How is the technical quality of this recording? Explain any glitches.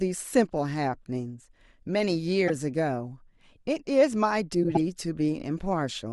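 The speech has two short decoding glitches. A corrupt frame was decoded at 2.48 to 2.50 s and again at 4.63 to 4.77 s: damaged compressed data was played as if valid, misplacing energy in frequency. The first is a brief glitch, peaking around -15 dBFS, consistent with a couple of frames. The second is a longer glitch, peaking around -10 dBFS, suggesting several consecutive frames.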